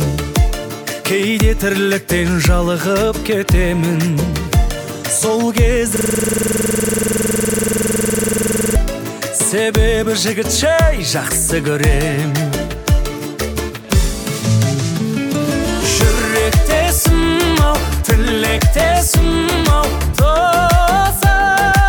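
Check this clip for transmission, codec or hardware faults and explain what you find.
One fault stands out. From 5.96 to 8.76 s there is a rattling, machine-gun stutter at about 21.5 repeats per second. This is a system hang loop: a single 46 ms piece replays roughly 60 times while the hardware keeps cycling a frozen buffer, which fits a 2048-sample size.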